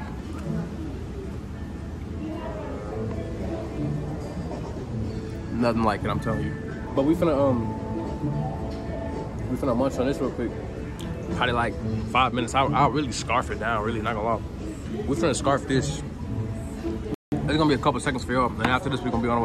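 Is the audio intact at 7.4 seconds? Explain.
Yes, the audio is intact at 7.4 seconds, with no dropout, click, distortion or other fault at that point.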